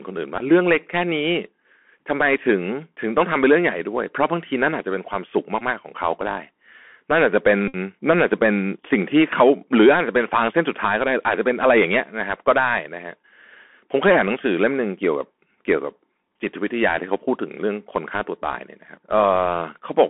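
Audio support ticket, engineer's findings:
Bluetooth CVSD headset codec, throughout: band limited to roughly 200 Hz–3.4 kHz, scratchy s sounds, granular hiss, slope-overload distortion on loud peaks. Points to a 64 kbit/s CVSD headset link.

Bluetooth headset packet repeated at 0.38–0.42 s, 5.59–5.62 s, 7.68–7.76 s: brief buzz near 267 Hz, longest about 56 ms at 7.68 s. Headset re-decoding the last packet after dropouts.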